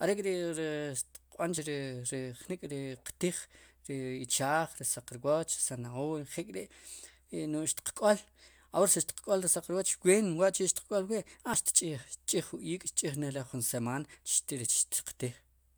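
At 1.58 s the speech jumps. This is overlap between stream segments. Two segments claimed the same moment, and the player trimmed real audio as if it were doubled. About 8 ms is lost there. It recurs at 9.56 to 9.58 s, a longer 25 ms skip, then at 11.54 s and 13.53 s. The last three fall 2 s apart, which fits 2-second segments. Each sounds like a tiny skip.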